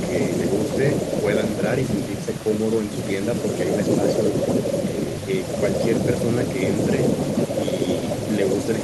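Speech recording, no technical faults found anywhere in the clip.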